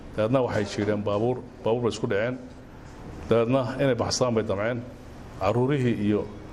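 Nothing is technically wrong with the clip, and no faults can be heard anywhere in the audio.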